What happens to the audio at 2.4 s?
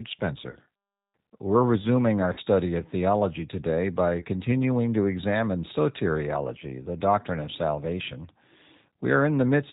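From 2.33 to 2.41 s there is VoIP packet loss concealed by the speech codec. About 40 ms of data, likely two 20 ms packets, went missing. The decoder stretched its last pitch and spectral envelope across the gap at falling gain, filling it with a short, fading stretch of stretched-out sound, with weakened speech lingering briefly afterward. Underneath, the G.729 codec at 8 kbit/s is plainly audible. Its pulse-based excitation and vocal tract model leave the speech band-limited below 4 kHz, rough and slightly synthetic.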